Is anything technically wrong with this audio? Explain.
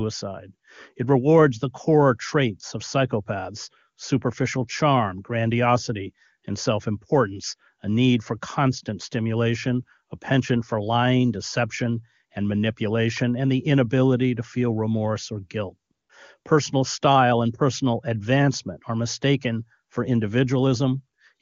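Yes, there are two brief AMR comfort noise gaps. From 15.91 to 16.09 s, just after "feel remorse or guilt", and again from 16.39 to 16.45 s, the phone decided the talker was silent and stopped sending speech frames for 180 ms and then 60 ms. The receiver filled each pause with synthetic noise built from a rough description of the background. The real ambience drops out, replaced by a smooth, steady hiss that switches in and out.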